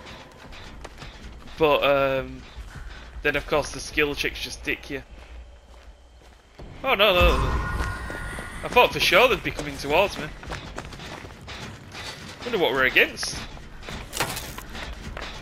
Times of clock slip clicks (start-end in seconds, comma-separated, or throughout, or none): 0.28-14.89